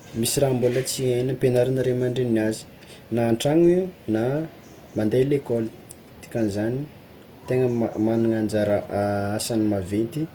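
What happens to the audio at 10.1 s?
At 10.1 s the speech carries the same Opus compression damage heard across the whole clip, likely from a low-bitrate Opus encode in its music mode. Band energy is preserved but filled in coarsely, so the voice sounds grainy and rough rather than swirling like MP3, with the full bandwidth to about 20 kHz intact.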